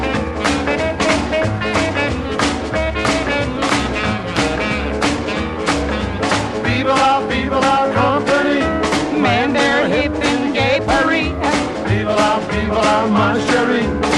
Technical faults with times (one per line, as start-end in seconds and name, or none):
0.00-14.18 MP2 compression
1.44-1.47 DAB burbling